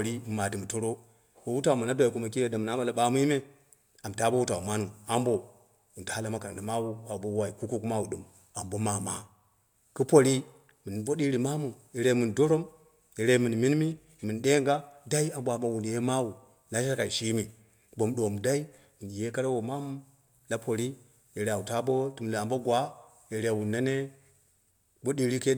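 Nothing technical goes wrong anywhere in this stretch of speech, so there's no fault to point to at any moment.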